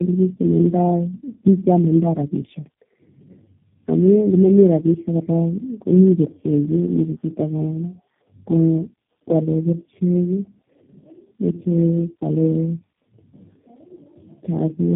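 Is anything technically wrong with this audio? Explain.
Yes. Throughout the clip, the speech sounds rough, muffled and warbly, with nothing above 3.8 kHz. This is tandem speech coding: the call passed through three low-rate speech codecs in a row, with plain telephone-rate links between them. Each coder discarded detail and added its own artefacts to audio already damaged by the previous one, so the losses compound. The character points to a chain of two AMR-NB stages ending in G.729A at 8 kbit/s.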